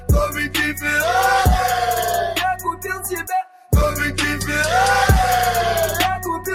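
Throughout, a noise suppressor applied to music or sounds is at work: a speech-oriented suppressor treats sustained tones and ambience as noise, so level swings by a few decibels as held material sinks and onsets pass, giving a pumping, thinned texture.

At 2.55 to 3.07 s and again at 3.23 to 3.72 s, sound is cut by the noise suppressor, dropping by about 10 dB and then about 12 dB for a few hundred milliseconds each, so sustained portions dip audibly and decays end early.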